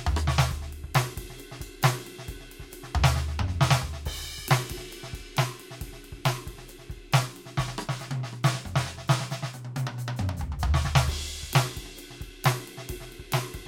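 No technical faults are audible in this music.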